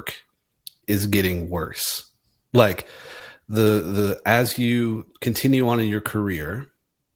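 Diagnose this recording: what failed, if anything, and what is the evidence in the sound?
Network packet loss produced scattered short gaps from 3.19 to 4.76 s, just after "is getting worse like". About ten brief ticks and smears, none longer than about 20 ms, were concealed by extending the preceding sound. That covers around a tenth of a second overall and adds 8 ms to the timeline.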